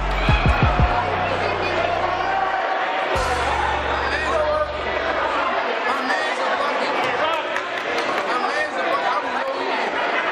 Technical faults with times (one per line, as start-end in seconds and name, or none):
9.43-9.48 one channel drops out